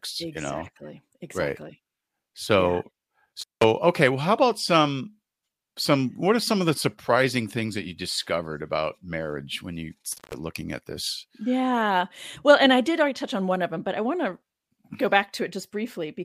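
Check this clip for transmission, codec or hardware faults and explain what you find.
There is one hardware fault, an intermittent contact, and it occurs twice in this speech. The first is at 3.41 to 3.64 s. The second is at 10.12 to 10.35 s, between "about marriage when you" and "looking at this". Each time a loose plug or cable briefly loses connection. The signal drops out for about 177 ms and then about 159 ms. Crackle marks the break and the reconnection. Faint hiss remains while the line is open.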